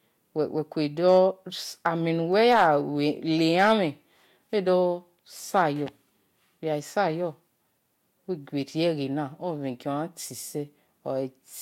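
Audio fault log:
1.07–1.19 s, 1.86 s, 2.44–2.68 s, 3.59–3.72 s, 5.56–5.63 s: hard clipping. Speech peaks overrun the stage's limit by about 2 to 5 dB, worst at 2.44 s. They are sliced flat, and the squared tops add high harmonics heard as crackly fuzz.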